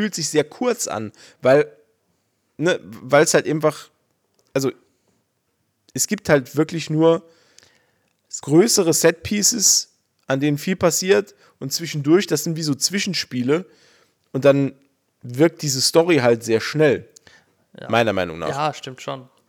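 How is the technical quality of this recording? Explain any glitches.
No audible technical faults.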